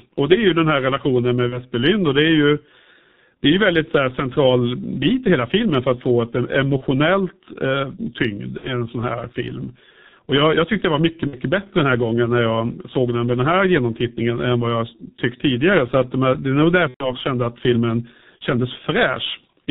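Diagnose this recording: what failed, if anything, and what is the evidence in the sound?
G.723.1 codec, throughout the clip: this is a codec-stage fault. The speech is band-limited with nothing above 4 kHz, so it sounds muffled, and the voicing has a hoarse, rough quality with smeared consonants. That points to a very low-rate coder that models the voice in 30 ms frames and updates that model slowly. The heavy damage fits the 6.3 kbit/s mode, so fast articulation is averaged away.

VoIP packet loss concealed by the speech codec occurs at 1.49–1.61 s (after "den här relationen med", before "och det är ju"), 6.77–6.84 s, 8.57–8.72 s (before "sån här film"), 11.27–11.38 s and 16.88–17.15 s (before "kände att filmen"). This is a network-stage fault. Missing data of 30, 30, 60, 60 and 120 ms was filled by the decoder extending its last pitch and filter, so each gap becomes a fading buzzy tone or coloured noise, and in the 120 ms gap it is muted from the third lost frame. 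The voice stays weak briefly afterward while the decoder state recovers.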